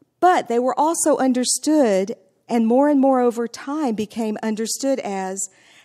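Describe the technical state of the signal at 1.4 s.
At 1.4 s the speech carries faint, evenly spaced ticks, part of clock slip clicks running from 0.13 to 5.81 s, roughly one every 0.15 s. The likely cause is two unsynchronised clocks around 150 ppm apart, each slip dropping or repeating one sample.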